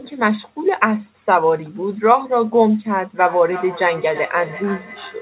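From 3.21 s to the end at 5.22 s there's feedback echo between two devices: a second device in the room replays the call and its mic sends it back, so the speech returns roughly every third of a second, thin and ringy, peaking about 15 dB below the direct voice, all squeezed into the 4 kHz telephone band of the G.711 path.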